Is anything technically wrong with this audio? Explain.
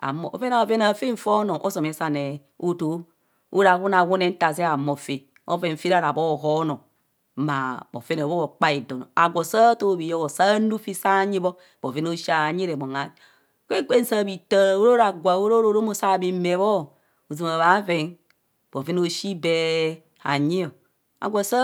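No technical faults detected.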